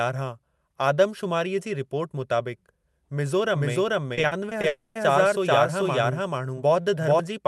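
From 3.54 s to 7.20 s a doubled audio track is heard: a second full-band copy of the speech, about as loud as the original, trails it by roughly 0.4 s. It has no room colour and cuts in and out abruptly, likely from a second, slower capture path mixed in.

Between 4.15 s and 4.65 s, repeated packet loss gives a choppy, robotic texture. Five short holes, the longest 40 ms, are patched by extending the preceding sound. About a quarter of that half-second is concealed rather than real audio, so pieces are missing.

From 4.67 s to 4.97 s comes a long network dropout. For about 0.3 s the receiver continues the last sound as a fading synthetic buzz, with no fall to silence. Audio then resumes without the lost section, likely because nothing arrived over the network during that gap. Throughout, the call codec's band limit near 12 kHz caps the top end.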